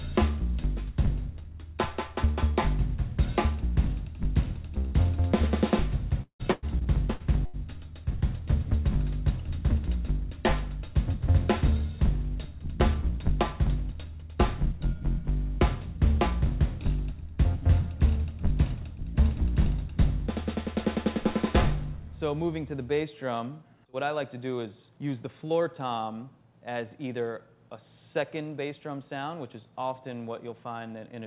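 From 6.22 to 7.56 s, packets are lost or arrive late again and again. This is repeated packet loss, giving a robotic sound. There are seven gaps in quick succession, the longest about 0.17 s. Concealment stretches the last sound across roughly a third of that span, and about another 0.46 s simply goes missing. The result is choppy and robotic, with pieces dropping out. Throughout the clip, the call codec's band limit leaves nothing above 4 kHz.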